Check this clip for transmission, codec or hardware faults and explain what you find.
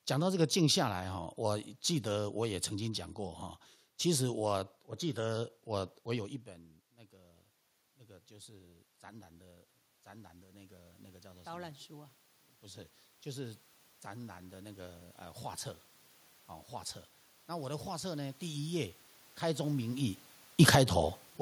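Two gain-control faults appear near the end, both from automatic gain control rather than the transmission path or codec.

From 17.47 to 21.23 s, automatic gain rising: the control judges the input too quiet and lifts gain by about 5 dB, so the speech and room noise swell together.

From 20.46 to 20.86 s, automatic gain falling: the control judges the input too loud, cutting gain by about 6 dB, so the speech briefly sinks along with its background. This overlaps the talker's own change in distance around 20 s.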